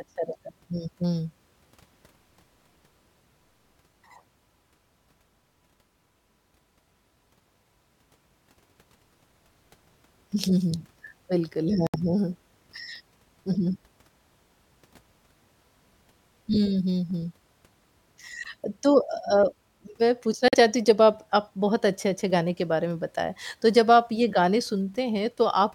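At 11.87 to 11.96 s and again at 20.48 to 20.54 s, the speech cuts to abrupt silence, then resumes further along as though it had kept playing. This is a Bluetooth dropout, likely from packets reaching the headphones too late and being discarded.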